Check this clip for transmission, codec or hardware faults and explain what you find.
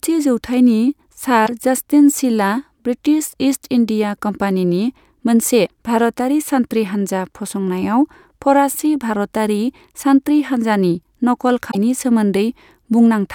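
The speech has one recurring fault. Damaged data in a compressed stream at 1.43–1.49 s, 5.63–5.70 s and 11.70–11.75 s: corrupted bytes make the decoder misread frames and lose sync until it finds the next valid header, so each spot breaks into a brief chirp, squawk, click or short hole lasting about 50 to 75 ms.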